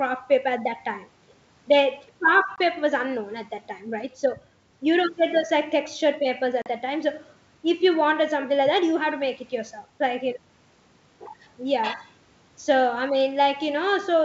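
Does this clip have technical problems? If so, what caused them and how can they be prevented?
Yes. Packet loss on an ADPCM call occurred at 2.56–2.59 s, where 20 ms went missing, and at 6.62–6.68 s, where 40 ms went missing. Each loss left a hard-edged silent gap. The decoder's adaptive predictor and step size then lagged the sender's, so the speech returns slightly distorted before settling. Redundant or forward-error-corrected packets, together with concealment that resets the decoder state after a loss, would prevent it.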